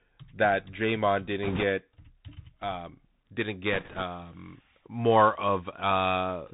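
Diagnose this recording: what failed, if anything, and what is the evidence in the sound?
The whole clip has gone through the Bluetooth CVSD headset codec, so this is a codec-stage problem on a headset link. Nothing above 4 kHz survives, the s sounds come out scratchy, and a grainy hiss sits under the speech the whole way through. That fits a one-bit delta modulator running around 64 kbps: each sample only says up or down with an adapting step, and loud, fast high-frequency content outruns the step and distorts.

On top of that, there are two stretches of bit errors on a Bluetooth voice link, at 1.43 to 1.64 s and again right after "um didn't", from 3.73 to 4.03 s. Neither stretch clicks. Instead you get a rushing, crackly noise over the speech, heavier in the first burst, where roughly a few percent of bits were flipped, than in the second, at about half that. Because CVSD gives every bit the same small weight and its errors decay, corruption shows up as noise rather than pops.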